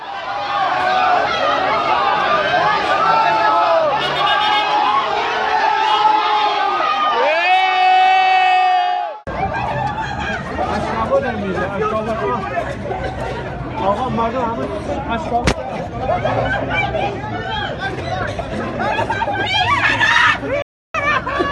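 A digital broadcast dropout at 20.62 to 20.95 s: the receiver lost valid frames and muted, cutting the sound within about 3 ms to roughly a third of a second of silence.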